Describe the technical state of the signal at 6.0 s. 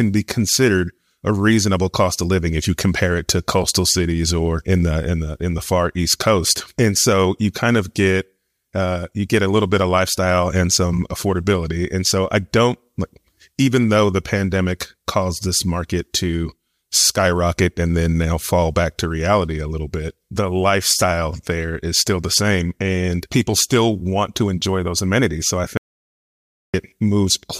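At 6.0 s the speech signal is intact, with no audible fault at that moment.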